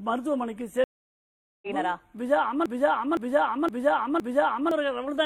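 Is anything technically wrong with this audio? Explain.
Yes, there are two faults.

A stream reconnect runs from 0.84 to 1.68 s. The connection dropped, the player went silent for about 0.78 s, then reconnected with a fresh decoder. Playback resumes roughly half a second further into the stream, so that stretch of audio is skipped.

A broken-record loop runs from 2.66 to 4.71 s. A 0.51 s fragment repeats exactly, back to back, four times. The likely cause is a stall in the player, encoder or stream that kept resending its last fragment, so the audio meant for that span is lost.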